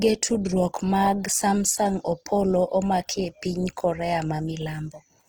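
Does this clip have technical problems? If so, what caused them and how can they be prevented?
Yes. Opus compression is plainly audible throughout the clip. The speech keeps its full bandwidth, extending to about 20.1 kHz, but sounds rough and grainy rather than swirly. The likely cause is an encoder working in its music (CELT) mode at a rate that fits roughly 16 kbps: too few bits for detail, so bands are filled with folded copies of lower bands or with noise, turning tonal parts hissy. To prevent it, encode speech at a higher Opus bitrate or let the encoder use its speech mode.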